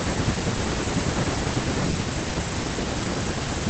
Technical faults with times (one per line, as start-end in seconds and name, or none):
1.91-1.95 short concealed packet loss
2.29-2.33 short concealed packet loss